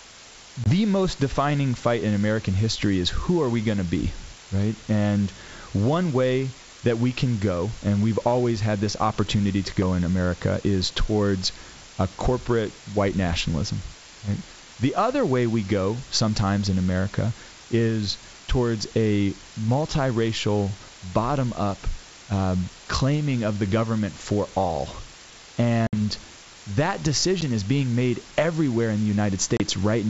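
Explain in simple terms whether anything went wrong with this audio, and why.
A steady, even hiss runs under the whole recording. This is low bit depth with dither: the speech was stored with very few steps of loudness, which fits about 6 bits, and added dither turns the rounding error into fairly loud, constant noise instead of harsh distortion.

Four brief dropouts come from packet loss on an ADPCM call: at 0.64 to 0.69 s, just before "most defining fight in"; at 25.87 to 25.96 s; at 27.41 to 27.43 s, before "is being made everywhere"; and at 29.57 to 29.62 s, after "made everywhere in the". Each gap is abrupt silence, and the decoder briefly loses track of the speech's level, so it comes back slightly off before settling. The wideband G.722 phone coding itself adds nothing noticeable.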